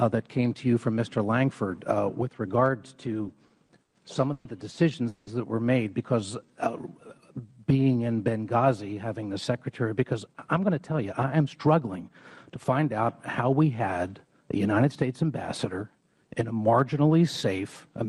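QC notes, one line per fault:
3.23–3.96 s, repeated stalls (stutter): packets kept arriving late, so the jitter buffer ran dry five times and the receiver stretched the last sound across each gap, 160 ms in all, the longest 80 ms. Nothing is lost, but about a fifth of that span is filler and the audio drags and stutters.
4.33–4.48 s and 5.09–5.30 s, call audio freeze: the audio halts for 120 ms and then 180 ms, held as a continued buzz or hiss from the last sound that never falls to silence, then resumes where it stopped. The likely cause is packets held up in transit and an emptied jitter buffer. Each pause inserts a gap without removing anything.
6.20–8.17 s, jitter buffer slow-down: to rebuild its reserve, the receiver repeated single pitch periods and slivers of pauses over and over, adding 277 ms. Playback runs at 86% speed with the pitch unchanged, so sounds come out drawn-out.
9.95–12.79 s, jitter buffer speed-up: the buffer was holding more audio than its target, so the receiver trimmed short pitch-period pieces again and again, removing roughly 0.4 s. 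The audio plays at about 113% speed at the same pitch and sounds hurried.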